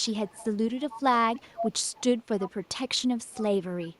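An echo canceller at the far end likely let its loudspeaker pickup through, causing an echo leak: a copy of the speech trailing 0.3 s behind, at 0.0–1.02, 1.34–2.02, 2.18–2.77, 2.95–3.02, 3.18–3.44 and 3.81–3.99 s. It is strongest around 1.3–2.0 s and faintest near 3.0 s.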